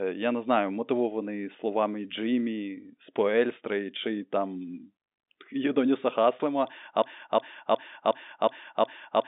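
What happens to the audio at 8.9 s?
At 8.9 s a broken-record loop is playing: one 0.36 s fragment repeats back to back, six times, from 7.02 s to the end of the clip. A stalled player or stream likely kept resending its last fragment, so the intended audio is lost.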